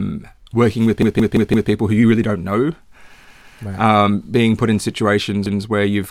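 A speech clip with repeated buffer stutters at 1.02–1.71 s after "working with", 3.24–3.58 s after "you really don't know", and 5.46–5.63 s before "where you've". A 171 ms block replays, fitting an 8192-sample buffer, and shows as identical copies with hard vertical seams on a spectrogram.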